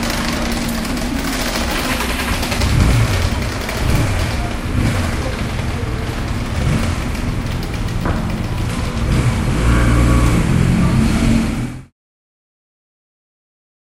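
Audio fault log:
Nothing stood out on listening to these sounds, apart from a smooth fade-out that begins at around 11 s and finishes at 11.93 s.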